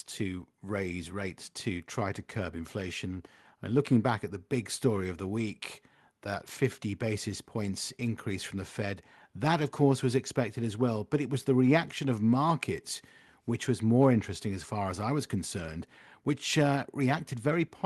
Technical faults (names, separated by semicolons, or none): none